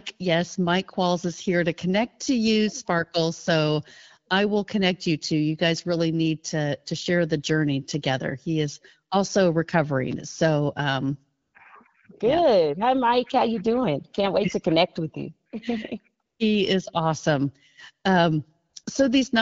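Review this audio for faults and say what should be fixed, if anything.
AMR comfort noise appears at 11.41–11.53 s, 16.25–16.39 s, 18.69–18.73 s and 18.83–18.85 s. The phone judged these gaps silent and stopped sending speech frames. The receiver then substituted smooth synthetic noise for the real background. Lengthening the voice activity detector's hangover, or disabling discontinuous transmission, would prevent this.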